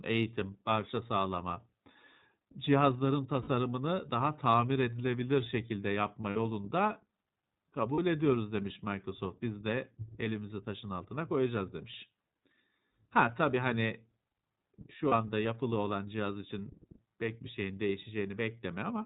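This is a speech recording coded throughout with the iLBC codec. The narrowband sound stops around 4 kHz and has a rough, slightly synthetic edge, which fits roughly 13 kbps with 30 ms frames. There are also four short dropouts from lost iLBC frames, where the decoder fills each gap with a held, buzzy repeat of the last pitch cycle before recovering almost at once. These occur at 3.42 s (about 60 ms), at 6.30 s just after "tamir edilebilir şekilde yapma" (about 60 ms), at 7.94 s just before "ediyoruz demiş" (about 30 ms), and at 15.08 s just before "anda yapılı olan cihaz" (about 30 ms).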